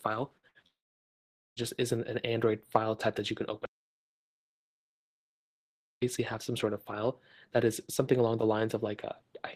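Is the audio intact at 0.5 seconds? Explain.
No. At 0.5 s you're inside a burst of packet loss running from 0.49 to 0.58 s, right after a similar one at 0.37 to 0.46 s. A run of packets never arrived in time, so the receiver stretched the last good sound for about 59 ms, fading it as it went. That comes across as a brief held buzz or dwindling hiss, and then the audio jumps forward with about 60 ms of sound missing.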